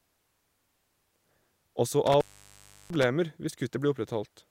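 Intermittent contact appears between 2.06 and 3.04 s. A loose cable or connector in the signal path briefly lost its connection, so the speech drops out for about 0.69 s of that stretch. The break is audible as crackle where the contact scrapes open and again where it closes. While the line is open, faint hiss remains, and the speech returns once the connection is restored.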